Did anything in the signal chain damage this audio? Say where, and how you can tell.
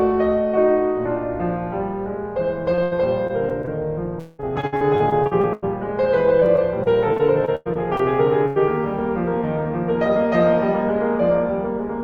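Yes. Repeated packet loss (robotic sound), a network fault, occurs at 2.75–3.69 s, 4.19–5.64 s and 6.40–8.01 s. Lost packets are patched by extending the preceding sound, and gaps recur quickly, so the music turns choppy. The middle stretch is worst: over a third is concealed, with gaps up to about 0.2 s.

A burst of packet loss, also at the network stage, hits 8.47–8.58 s. About 80 ms of audio never arrived. The receiver stretched the last sound and let it fade across the hole, and the music then picks up further along with that section missing.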